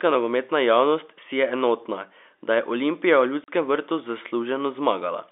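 At 3.44 s the speech drops out for 40 ms, packet loss filled with silence, a gap consistent with two 20 ms packets, hard-edged rather than smeared over like concealment.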